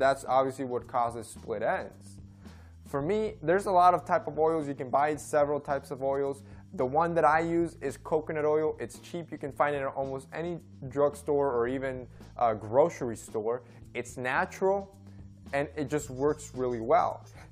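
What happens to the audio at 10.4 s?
Nothing goes wrong at 10.4 s; the audio plays through that moment intact, with no dropout, click or distortion.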